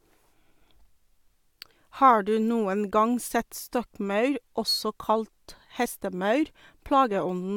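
Overlap between stream segments at 3.86 s, after "du noen gang sett": overlapping timestamps caused 13 ms of speech to be discarded, heard as a tiny skip.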